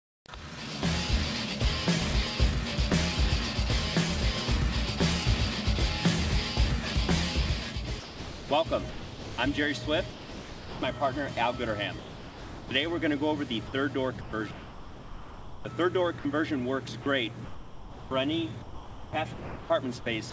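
The first quarter second, from 0.00 to 0.26 s, is a flat, featureless hiss about 20 dB quieter than the real background, which sits about 48 dB below the loudest passages. That is comfort noise in place of the background: the sender's voice detector likely judged the opening to be silence and stopped transmitting, so the receiver synthesised a smooth noise bed roughly matching the background's spectrum instead of playing the actual ambience.

From 8.00 to 9.38 s, 13.67 to 15.65 s, 17.03 to 18.11 s and 18.62 s to the end, the sound turns choppy: soft onsets and tails vanish. This is sound chopped by the voice detector, likely caused by the detector toggling transmission on and off several times within each stretch, so fragments totalling roughly 0.7 to 1.3 s per stretch were swapped for fill.

At 10.10 to 10.82 s, 11.99 to 12.71 s and briefly at 16.19 to 16.25 s, the sound simply gives way to steady noise or near silence and then returns. 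This is sound dropped by the voice detector, likely because quiet material was mistaken for background and not sent, losing up to 0.72 s each time.

The call path itself shows nothing above 8 kHz, which fits a 64 kbps wideband codec such as G.722.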